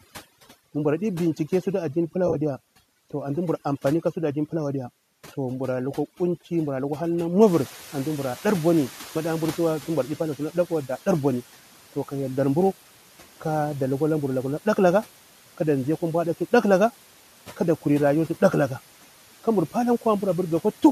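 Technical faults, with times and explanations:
Throughout: overdone noise removal. The suppressor is set too hard, so the background drops and breaks up into twinkling specks.
2.27 to 2.36 s: AAC frame loss with concealment, just after "bincike sutu addini pila". About 50 ms of frames go missing across 80 ms in short runs, so the decoder patches from the last good spectrum and you get a brief smeared, phasey blip.
7.91 s: AAC frame loss with concealment again, a single 10 ms frame filled in by the decoder, heard as a tiny smeared tick.
7.46 to 10.16 s: noise suppressor catching up, right after "mburu lukwa hal na". The room noise jumps about 16 dB and the suppressor's estimate lags, so the noise comes through with less reduction at first and then sinks about 9 dB over 2.7 s as it adapts.
17.47 to 17.60 s: speech cut by the noise suppressor, just before "kuri rayuwa". It takes about 100 ms of soft speech for noise and ducks it by up to about 8 dB, so that bit sounds swallowed.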